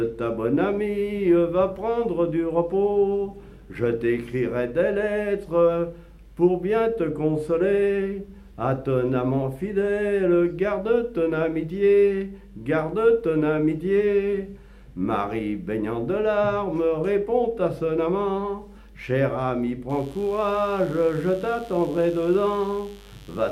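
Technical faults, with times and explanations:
19.89–23.52 s, mains buzz: a steady, raspy buzz enters at 19.89 s and continues to the end of the clip, sitting around 30 dB below the main sound. Its fundamental is 50 Hz, and its rasp comes from a dense stack of harmonics reaching into the kilohertz range. That spectrum is produced by sharp switching spikes, such as those from a dimmer or rectifier or through a missing shield, recurring twice per mains cycle and coupling into the signal path.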